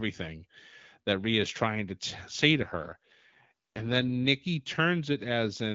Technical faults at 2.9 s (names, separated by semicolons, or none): AMR rate drop